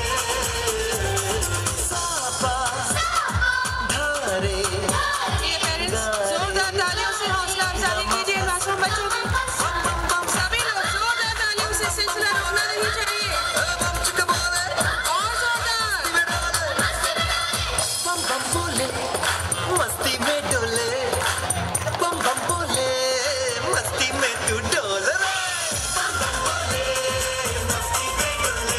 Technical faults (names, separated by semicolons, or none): none